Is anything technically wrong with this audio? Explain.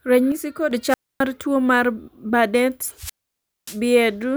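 Yes, there are two kinds of fault in this speech clip.

From 0.32 to 0.71 s the speech suddenly drops by about 6 dB and then jumps back up, with no gap and no added noise. This is likely one channel dropping out of a stereo recording that is heard as a mono sum. Sound shared by both channels loses half its contribution, so it falls by a fixed step. Unlike a squelch mute, the level steps down instead of cutting out, and no hiss comes first.

There are two wireless microphone squelch dropouts. At 0.88 s hiss rises as the FM radio link fades, and then the receiver's squelch mutes the output to near silence for about 0.26 s. The speech comes back at "tuo mar" at 1.22 s. The second dropout starts at 2.96 s and has a longer hole of near silence, about 0.58 s, before the sound returns at 3.80 s. The rising static just before each silence is what separates these from a simple edit or a channel loss.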